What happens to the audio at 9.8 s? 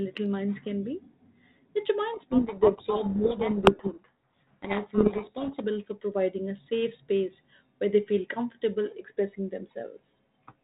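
Nothing goes wrong at 9.8 s: the speech there comes through intact, carried by the same 32 kbit/s G.726 telephone-band coding as the rest of the clip, with no dropout, click or other fault at that moment.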